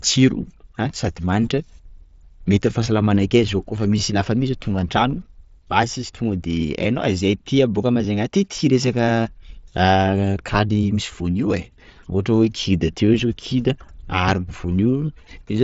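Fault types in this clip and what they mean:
No faults detected; the speech runs through an mSBC Bluetooth headset path, with nothing above about 7.7 kHz and only light codec graininess on louder passages.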